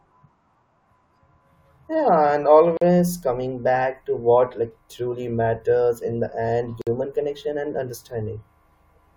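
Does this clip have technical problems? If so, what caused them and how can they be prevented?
Yes. Brief silences break continuous speech at 2.77 to 2.82 s (about 43 ms) and 6.82 to 6.87 s (about 53 ms), four seconds apart. These are gaps at a join of encoded pieces: separately encoded segments were joined with encoder start delay and last-frame padding left in. Prevent this by trimming encoder delay and padding before joining, or by encoding the material as one continuous stream.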